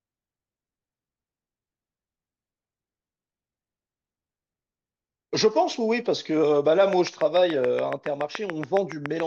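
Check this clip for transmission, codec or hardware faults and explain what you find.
One fault stands out in the speech, a hardware-type disturbance near the end.

Train of clicks, from 6.93 s to 9.21 s: a regular series of sharp pulses, about 7 per second, roughly fifteen in all, peaking around 10 dB above the speech. Each click has much the same shape, which points to a repeating electrical event, likely interference from nearby equipment or a faulty connection or power supply. It is heard as steady ticking laid over the speech and into its gaps.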